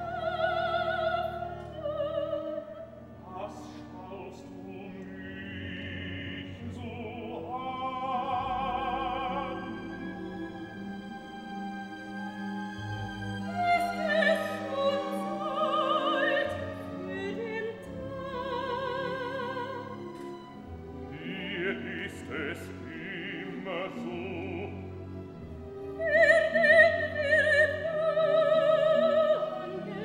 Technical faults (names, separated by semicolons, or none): none